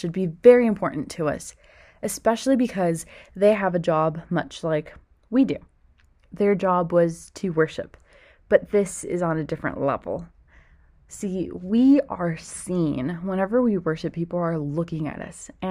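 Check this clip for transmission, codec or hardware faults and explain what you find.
One fault is present. From 3.55 s, just after "us especially because they", to the end, de-emphasis is applied wrongly. A treble cut meant to undo pre-emphasis hits audio that had none, or is applied twice. The response slopes smoothly down, about 8 dB lower at 10 kHz than at 1 kHz. The speech sounds dull and muffled.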